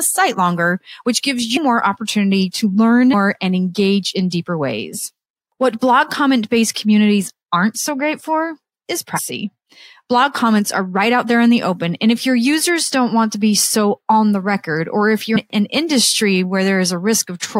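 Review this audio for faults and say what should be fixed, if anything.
Compressed frames skipped at 1.56 s and 9.16 s: the speech jumps ahead roughly 150 and 200 ms (multiples of 26.1 ms frames), showing as smeared seams in spectrogram and waveform. Verify file integrity and repair or re-encode damaged streams before playback.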